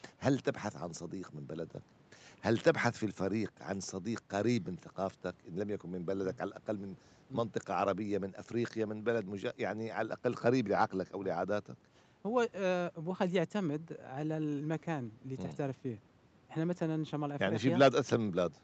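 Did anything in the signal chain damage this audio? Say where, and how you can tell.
No, nothing damaged it.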